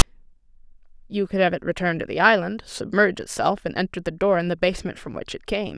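File tags played as audio occur at 0.00 s, right at the start of the speech. A block of text metadata at the head of the file has been decoded as though it were sample data, so the character bytes become a waveform. Because text bytes cluster in a narrow range of values, the result is a loud rasp offset to one side of zero. It lasts only about 15 ms, heard as a hard-edged click of static at the very start of the clip.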